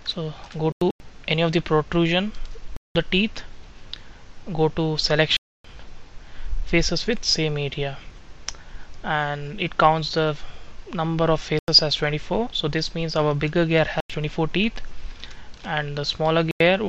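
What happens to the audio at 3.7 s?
Nothing goes wrong at 3.7 s; the audio plays through that moment intact, with no dropout, click, distortion or other fault.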